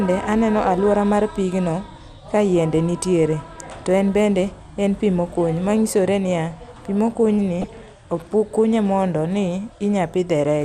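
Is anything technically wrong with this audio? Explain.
Yes, two things. The whole speech clip sounds dull, with a gurgly, granular edge: likely MP2 compression at a low rate, around 80 kbps, with upper sub-bands dropping out and the rest coarsely quantised. At 7.61 to 7.64 s there's a short DAB burbling: a small scatter of bit errors slipped past error correction, so wrong samples put short blips of noise into single sub-bands.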